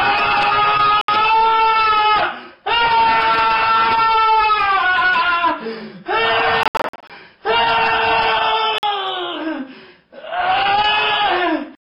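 Audio packets likely failed to reach the headphones in time, a Bluetooth dropout, so the output cut to silence and resumed further on. Gaps appear at 1.01 to 1.09 s (about 70 ms), as a scattered cluster of holes totalling about 255 ms between 6.63 and 7.10 s, and at 8.78 to 8.83 s (46 ms), each with abrupt or briefly faded edges.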